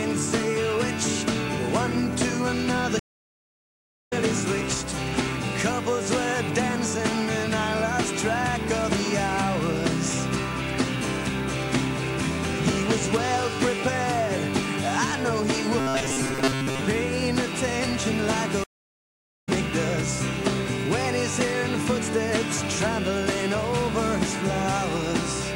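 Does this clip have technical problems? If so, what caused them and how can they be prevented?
Yes. There are two stream reconnects. From 2.99 to 4.13 s the audio drops out for 1.12 s and resumes about a second further on. From 18.64 to 19.49 s it goes silent for 0.84 s and skips about half a second. Each time the connection broke and a fresh decoder restarted mid-stream. A larger receive buffer and automatic resume from the last byte position would prevent this.

From 15.79 to 16.83 s the sound turns into a rigid, metallic buzz at 133 Hz. This is robotic sound from repeated short buffers. Repeating a block of about 7.5 ms sets that pitch, and most of the real audio is skipped. The likely cause is new audio arriving too seldom. Steadier delivery and a deeper jitter buffer would prevent it.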